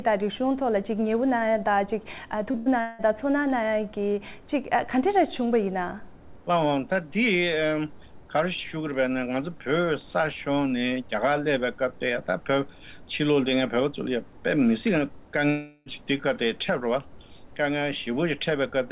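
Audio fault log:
2.51–2.57 s, short concealed packet loss: about 30 ms of audio didn't make it to the decoder in time, so the receiver patched the hole by stretching out the last bit of sound for roughly 25 ms before blending back in. You hear it as a quick smear or wobble.
2.57–2.69 s, burst of packet loss: right after that, around 90 ms went missing in one run. The receiver kept extending the previous sound and faded it down over about 93 ms, giving a short held buzz or hiss before the audio picks up further along, with that stretch gone.
2.81–3.02 s and 15.50–15.89 s, long network dropout: in both places the sound turns into a fading buzz or hiss for about 0.18 s and then about 0.36 s before real audio returns, and what should have been there never comes back. The likely cause is the network delivering nothing for those spans, with the receiver filling almost the whole gap rather than dropping to silence. 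The concealment sounds carry the same dull, 4 kHz-limited character as the rest of the G.711 call audio.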